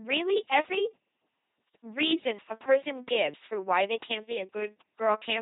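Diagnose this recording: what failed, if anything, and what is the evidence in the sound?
The failure is at the codec stage: the speech passed through an LPC-10 vocoder for the whole clip, and the damage is heavy. The codec throws away the original waveform and rebuilds each moment from a short all-pole filter excited by either a pulse train or noise, all-or-nothing. The result is a buzzing, mechanical robot voice, with buzz or hiss wherever the voicing choice is wrong. Nothing remains above 3.9 kHz, which fits a narrowband model running at about 2.4 kbit/s.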